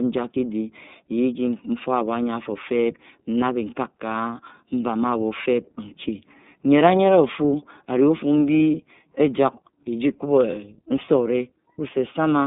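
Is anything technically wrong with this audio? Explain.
Yes. Throughout, the speech sounds thin, rough and slightly synthetic, with nothing above 3.8 kHz. This is iLBC codec damage: each 30 ms frame is coded independently within a narrow 150 Hz to 3.7 kHz band, which fits the 13.33 kbps mode.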